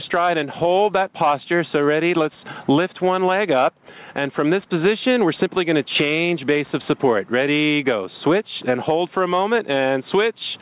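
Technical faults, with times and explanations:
Throughout, gain pumping: the gain swings about 10 dB, pulled down on each loud sound, leaving loud and soft parts closer in level, likely from excessive gain hitting a fast limiter.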